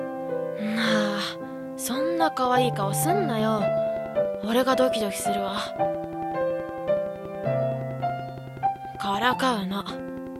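A train of clicks runs from 2.45 s to 10.37 s: around a hundred near-identical pulses at a steady 10.6 per second, roughly as loud as the sound itself, ticking through quiet gaps too. Interference from nearby equipment or a faulty connection or power supply is the likely cause.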